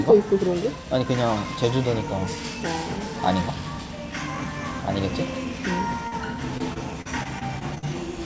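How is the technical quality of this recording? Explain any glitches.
The recording has two packet-loss problems near the end, one brief and one sustained. The audio came through a call path with nothing above 8 kHz, consistent with a wideband codec such as G.722 at 64 kbps.

Short concealed packet loss, 6.08 to 6.14 s: About 40 ms of the stream failed to reach the decoder in time. The receiver covered the hole by extending the sound it had just played, synthesising roughly 36 ms, then crossfading back into the real signal. What you hear is a quick smear or wobble.

Repeated packet loss (robotic sound), 6.58 to 7.84 s: Here the stream suffered eight separate dropouts, totalling about 200 ms, the longest around 42 ms. Each time, the decoder patched the gap by extrapolating the preceding sound, and the next loss arrived before the audio settled. About 15 percent of this stretch is synthetic fill. 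The result is choppy sound, with fragments missing throughout that span.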